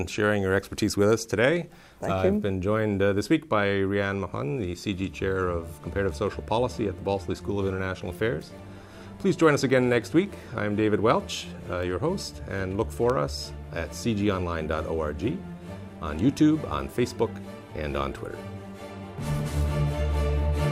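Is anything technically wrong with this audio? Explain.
No, nothing technically wrong can be heard in this audio. There are no faults to point to anywhere in the clip.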